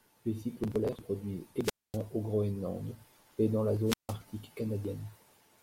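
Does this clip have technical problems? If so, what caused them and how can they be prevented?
Yes: wireless microphone squelch dropouts at 1.63–1.98 s, after "cyclones polaires se produisent", and 3.84–4.16 s, after "et dans la". A weak FM signal lets hiss rise before the receiver's squelch mutes the speech for 0.24 s and 0.16 s. To prevent this, keep line of sight and shorten the transmitter-to-receiver distance, or use diversity antennas.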